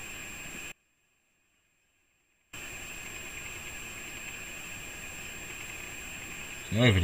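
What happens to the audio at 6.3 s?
Nothing goes wrong at 6.3 s: the audio plays through that moment intact, with no dropout, click or other audible fault.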